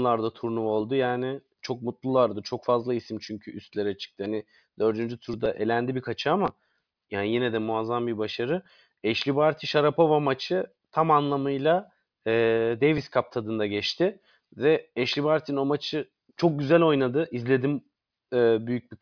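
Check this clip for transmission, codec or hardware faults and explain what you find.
Nothing in the speech points to a transmission, codec or hardware fault.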